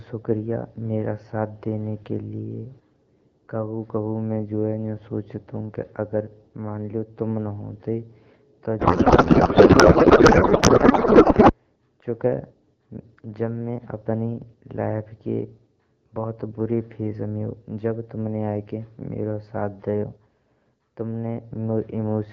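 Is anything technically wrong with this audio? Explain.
Yes. From 8.79 to 11.53 s there is a codec payload misread. The speech turns to garbled noise and warble that barely tracks it. This fits octet-aligned AMR-WB frames being unpacked as bandwidth-efficient, which puts every field in the wrong place.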